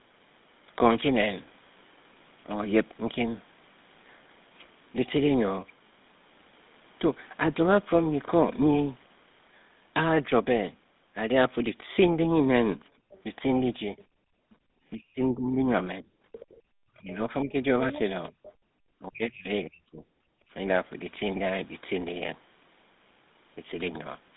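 Throughout, the speech carries the buzzy, gravelly roughness of the GSM full-rate codec. Nothing passes above 3.8 kHz and the line band runs from 150 Hz to 3.7 kHz. The damage is plainly audible and fits a 13 kbps codec. Unlike simple band-limiting, the grain comes from pulse-driven excitation.

From 12.9 to 14.66 s the background is gated by the echo canceller, dipping by as much as about 32 dB for roughly half a second in total. Only the room sound drops, not the talker, and it returns once the canceller releases.

Between 13.1 and 14.04 s the other side's voice leaks through faintly, roughly 30 dB below the speech, likely residual loudspeaker echo the canceller missed. It comes through as a second voice rather than noise.

From 13.86 to 20.03 s, speech is suppressed in double talk. The talker's own voice dips by up to roughly 30 dB, for about two seconds in all, while the far side speaks, likely because the canceller turned both down together. 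Here the voice itself drops, not just the background.

A louder leak of the other side's voice runs from 16.32 to 18.53 s, around 15 dB below the speech.

Short background gating recurs from 16.54 to 16.65 s, about 27 dB deep, and from 20.31 to 20.51 s, about 28 dB deep. These are brief holes in the room sound, not in the voice.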